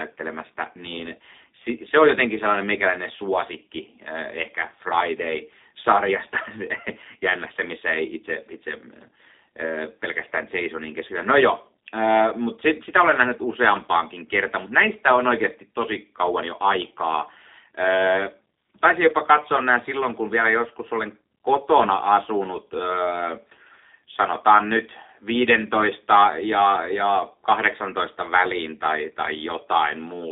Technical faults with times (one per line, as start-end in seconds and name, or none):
0.00-30.31 G.729 codec